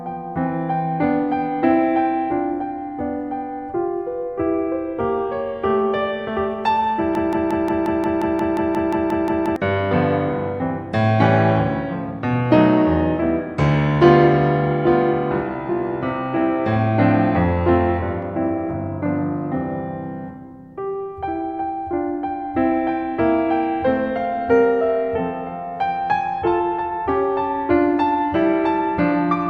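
From 7.15 to 9.56 s the music sticks in a broken-record loop: a 177 ms fragment repeats 14 times, likely a stalled stream, drawing identical repeating blocks on the waveform.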